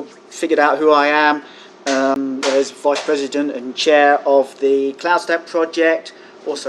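At 2.14 s there is a CD skip. The laser lost its track on the disc's spiral and landed on a different turn, so the player muted for roughly 15 ms and resumed from another point in the material. It sounds like a small tick followed by an abrupt jump, with the sound continuing from somewhere it shouldn't. On a waveform this appears as a short flat gap with a break in continuity on either side. A spectrogram shows a thin vertical broadband stripe.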